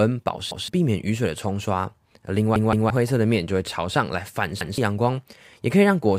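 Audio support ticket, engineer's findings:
Repeated buffer, three hits in the speech. 0.51–0.68 s: one chunk of about 170 ms plays twice, hard join, roughly 150 ms of real audio skipped. 2.56–2.90 s: same chunk three times, longer stutter, about 300 ms gone. 4.61–4.78 s: one extra play again, about 150 ms lost. Chunk length fits an 8192-sample output buffer. Playback device starved, so it replayed the last buffer until fresh data arrived.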